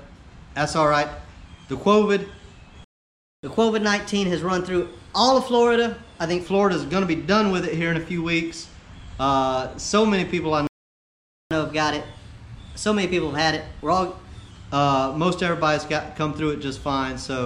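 At 2.84 s the sound just cuts out for about 0.59 s, a playback stall, most likely the player running dry or its thread getting blocked, then picks up again at 3.43 s. The same thing happens at 10.67 s, this time for about 0.84 s, resuming at 11.51 s.

Right after each gap there's a catch-up at higher speed: from 3.43 to 6.43 s and again from 11.51 to 14.51 s, the player resamples its backlog at 1.1x, so everything runs faster and sits roughly a semitone and a half sharp before settling back.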